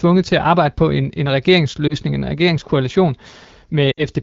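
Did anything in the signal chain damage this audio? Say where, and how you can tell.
Yes, at the network stage: lost AMR speech frames. From 1.88 to 1.95 s, between "arbejde på en en" and "en regeringskoalition", there is a brief warbling dip. From 3.92 to 4.03 s the sound drops to near silence. The decoder replayed the last good parameters at falling gain.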